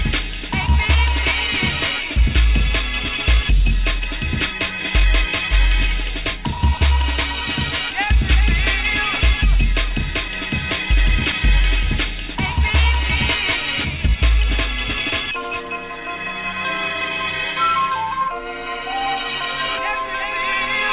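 No technical faults can be heard anywhere in the clip. There are no problems to place in time or to explain.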